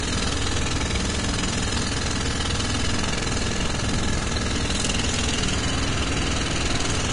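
Throughout, the audio has a hissy, grainy character, with roughened tones and smeared attacks, and nothing above about 10.5 kHz. A spectrogram shows a hard ceiling there and speckled treble. Heavy Vorbis compression, likely around 33 kbps, would explain this.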